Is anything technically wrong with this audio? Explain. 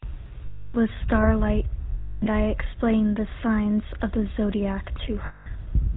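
Yes, there are two faults. GSM full-rate codec, throughout: the voice is rebuilt from a vocal-tract model and sparse pulses, with nothing above 4 kHz, leaving an audibly buzzy, gravelly roughness. Lost GSM frames, 0.46 to 0.75 s: for about 0.28 s the last good frame's settings are repeated, so the sound is held as a rough, metallic ring.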